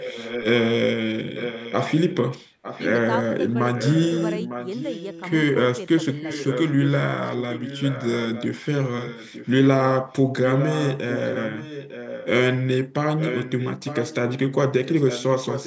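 Echo leak runs through the speech at 0.00–0.46 s, 1.34–2.94 s, 3.74–5.22 s, 6.16–6.89 s, 7.26–9.66 s, 10.12–12.28 s and 13.17–15.66 s. A fainter second copy of the voice trails the original by about 0.9 s. It sits about 10 dB down, dropping to about 15 dB down in the third and fifth stretches. The likely cause is a far end on loudspeaker whose echo canceller let part of its microphone pickup travel back down the line.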